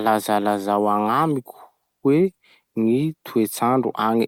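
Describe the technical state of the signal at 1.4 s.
At 1.4 s the speech signal is intact, with no dropout, clipping, distortion or other fault to be heard at that moment.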